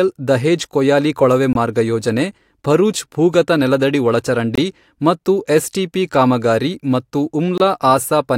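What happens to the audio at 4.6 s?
A gap between chunks opens from 4.55 to 4.58 s: a hard-edged, 23 ms silence at a chunk join. Unlike a dropout, nothing is lost; the sound resumes exactly where it stopped.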